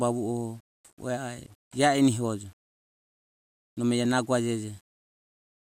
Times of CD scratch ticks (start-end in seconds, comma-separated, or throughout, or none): none